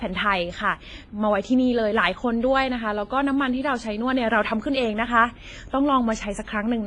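From the first moment to the last, the speech has that ringing, washy quality of heavy transform coding, most likely WMA compression at a low bitrate, something in the region of 24 kbps. Quantisation noise is smeared over long blocks, so a hiss swells and fades along with the signal, and the encoder has thrown away weaker detail. Nothing at all survives above 10.5 kHz, which leaves the top end dull and sealed off.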